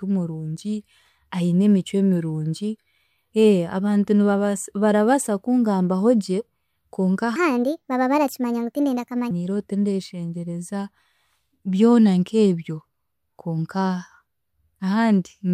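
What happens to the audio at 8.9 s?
At 8.9 s the speech is in a wrong sample rate stretch running from 7.36 to 9.31 s. It plays 1.38 times fast and about 5.5 semitones high, which fits 32 kHz audio played back at 44.1 kHz. On a spectrogram, harmonics and formants jump upward and compress in time.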